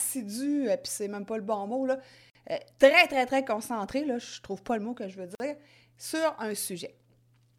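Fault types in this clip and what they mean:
Gap between chunks: the speech arrives in 3 s blocks with 50 ms of silence at each join, at 2.3 s after "pas le bon mot" and at 5.35 s; the waveform drops flat with sharp edges, and the spectrogram shows blank vertical strips.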